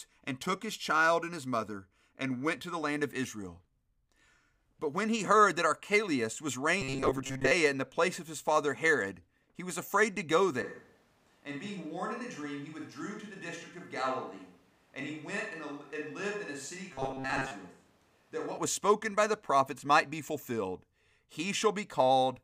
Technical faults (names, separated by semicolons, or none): robotic sound from repeated short buffers; switch to a distant microphone